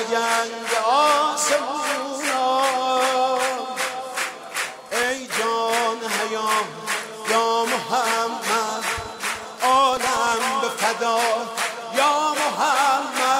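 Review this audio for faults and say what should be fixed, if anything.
From 9.93 to 10.43 s there is processor overload crackle: the processor repeatedly missed its deadlines for very short buffers, under a millisecond each, leaving about ten hard-edged silent gaps that add up to a gritty tearing over the sound. To prevent it, use a larger buffer or reduce processing load during playback or capture.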